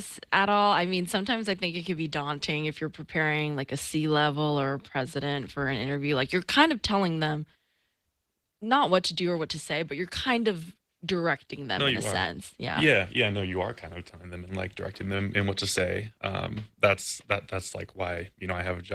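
Opus voice compression runs through the whole clip, with plainly audible damage. The speech is coded in hybrid mode: a linear-prediction core below 8 kHz with a transform layer above it, at full bandwidth. The roughness of the coarsely coded excitation suggests about 16 kbps.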